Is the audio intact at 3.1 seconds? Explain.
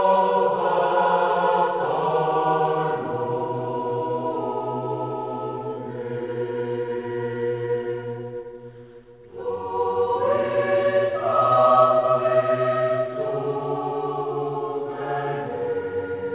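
Yes, the audio is intact at 3.1 seconds, carried through a WebRTC call path whose G.711 mu-law coding leaves nothing above 4 kHz.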